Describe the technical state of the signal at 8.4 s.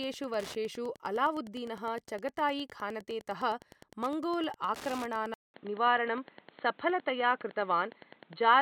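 At 8.4 s the speech is coming through what is likely a poorer input device. The system switched to it at 5.34 s, after a 0.2 s silence, and it stays in use to the end. This device passes nothing above 4.3 kHz, so the voice sounds dull and boxy. Its level sits a few decibels away from the earlier section, with its own noise floor roughly 40 dB below the signal. On a spectrogram, energy stops at a flat ceiling near 4.3 kHz from 5.34 s onward. The waveform shows a brief flat gap at the switch.

Wi-Fi interference also runs through this moment, as it does through the whole clip. A nearby radio's beacon, sent every 102.4 ms and rectified by the audio circuit, produces a steady tick about ten times a second, around 20 dB below the speech. A spectrogram shows it as thin vertical lines at a regular spacing, and the waveform carries small evenly spaced spikes.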